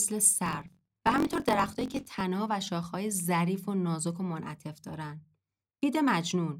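A block size mismatch (truncated) runs from 0.44 s to 2.23 s. One stage hands over longer blocks than the next stage takes in, so the tail of every block is dropped. The result is a buzz at about 45.9 Hz, the rate of those cuts, which fits blocks of around 1024 samples. Because a slice of each block is lost, the speech runs about 1.07 times faster while its pitch stays close to normal.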